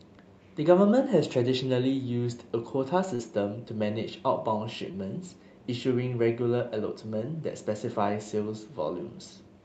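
Brief smears at 3.15 to 3.21 s and 4.91 to 4.95 s are short concealed packet loss: about 40 ms and 20 ms of audio arrived too late, and the receiver bridged each gap by extending the preceding sound.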